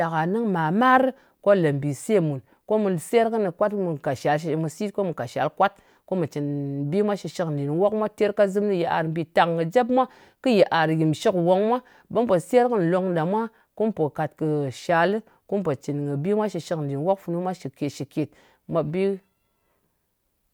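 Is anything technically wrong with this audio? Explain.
No, there are no technical faults in this recording.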